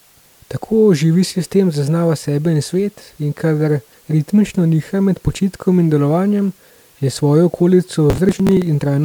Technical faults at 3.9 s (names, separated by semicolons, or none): corrupt frame decoded